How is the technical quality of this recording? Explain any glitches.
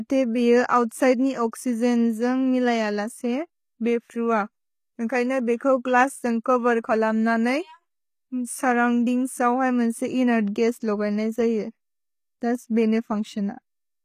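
The speech carries audible coding damage from start to end, most likely HE-AAC compression at a low bitrate, around 20 kbps. Only the lower spectrum is truly coded; the treble is rebuilt by copying lower bands upward, so s sounds turn gritty and metallic, and nothing is present above 14.9 kHz.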